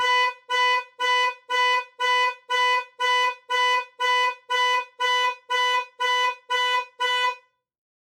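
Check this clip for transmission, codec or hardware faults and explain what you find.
Two related faults show up, both from a speech-oriented noise suppressor left running on non-speech sound.

Noise suppressor applied to music or sounds, throughout the clip: the processor treats steady components, ambience and decaying tails as background noise and pulls them down. Level swings by roughly 10 dB. Onsets pass largely intact, but sustained portions and reverberant tails sink, so the sound pumps and thins rather than holding a steady body.

Sound cut by the noise suppressor, between 0.31 and 7.49 s: within this span the suppressor misclassifies parts of the sound as noise and attenuates them harder than the rest, with the deepest drop about 12 dB and roughly three seconds affected in total. Held and fading material takes the worst of it, dipping in level or having its decay chopped short, while sharp transients mostly survive.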